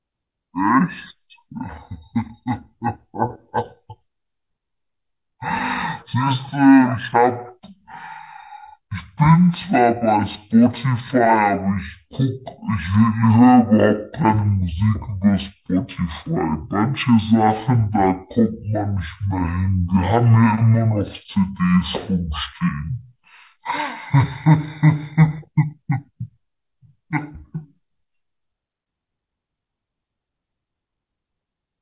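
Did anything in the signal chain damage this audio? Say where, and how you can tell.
Yes: a wrong sample rate at playback. Throughout, the speech runs at half speed and an octave low together, which fits 16 kHz audio played at 8 kHz. A pitch shifter would leave the timing unchanged.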